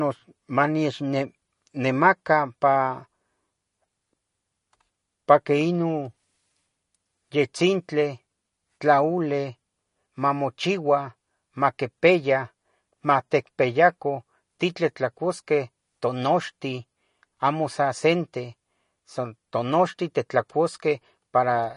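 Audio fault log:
Throughout, MP3 compression, likely the cause: the speech carries a plainly audible watery, swirling quality, and sibilants turn metallic and chirpy because weak frequency lines drop in and out from one frame to the next. The treble stops dead at about 10.6 kHz, which points to a low bitrate near 40 kbps. A spectrogram shows a flat ceiling at 10.6 kHz with scattered holes and blocky patches below it, and the waveform shows smeared consonant attacks.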